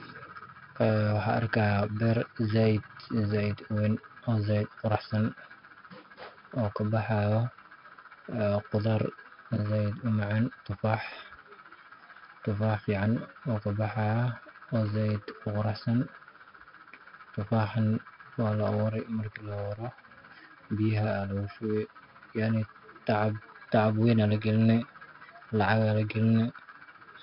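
A gritty hiss rides on every louder syllable of this speech recording, with nothing above 5.3 kHz, from heavy 4-bit ADPCM compression at an 11 kHz sample rate.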